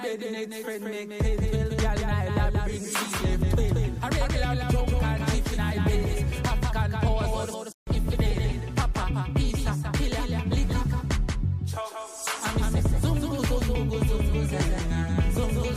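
From start to finish the audio carries a doubled audio track, most likely because the same signal was either captured a second time through a slower path or left in an edit as two copies out of step. A second full-band copy trails the original by around 200 ms at a level roughly 5 dB lower. Lacking any decay or room colour, it sounds like a distinct, flat repeat of every sound rather than reverberation.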